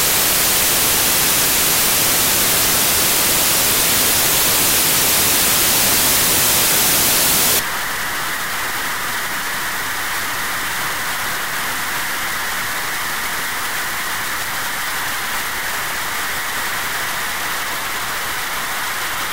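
Samples built from the wrong bytes run from 0.0 s to 7.59 s. The reader is assembling each sample from its bytes incorrectly, misaligned by a byte or with the order swapped. The rapidly fluctuating low-order bits therefore land in the most significant position. The result is loud, harsh broadband noise over that stretch.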